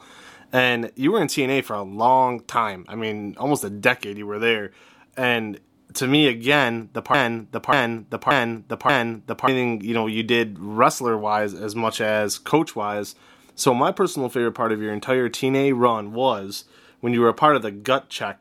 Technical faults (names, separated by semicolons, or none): broken-record loop